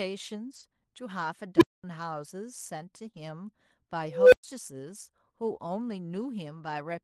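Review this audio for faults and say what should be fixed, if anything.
Lost packets rebuilt from error correction at 0.43 to 0.61 s, 3.07 to 3.09 s and 3.15 to 3.17 s. The decoder played low-bitrate copies carried in later packets. About 100 ms, then 20 ms twice, sound rougher and noisier, with no gap.

Short concealed packet loss at 3.11 to 3.15 s. About 20 ms never arrived. The receiver extended the preceding sound for 20 ms, which leaves a brief smear before the audio blends back.

Unstable filter at 1.57 to 1.84 s and 4.06 to 4.44 s. Bad coefficients let a recursive filter run away. A tone near 300 Hz swells in 43 ms and clips, then 224 ms of silence follows. A tone near 500 Hz builds over 261 ms, followed by 112 ms of silence.

Fix the filter coefficients with a stability check, and reduce network loss or increase the jitter buffer to cut packet drops.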